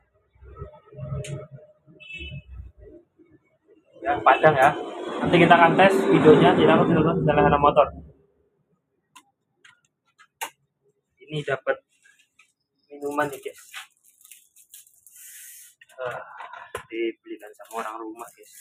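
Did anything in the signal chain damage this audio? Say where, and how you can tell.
Yes. The damage is in the call-processing stage: a speech-oriented noise suppressor was left running on material that isn't speech. All the way through, the level swings by roughly 10 dB as the suppressor decides what counts as noise. Steady, sustained parts get pulled down while sharp onsets slip through, so held sound and tails sag and pump. The suppressor is mistaking the ambience and sustain for background noise.

There are four stretches where it cuts much harder: 0.01 to 0.98 s, 1.52 to 2.03 s, 2.67 to 4.02 s, and 7.9 to 8.75 s. In these the sound drops by about 21 to 22 dB at the deepest point. This is sound cut by the noise suppressor. It classed these passages as noise and ducked them well below their surroundings, squashing decays rather than letting them ring out.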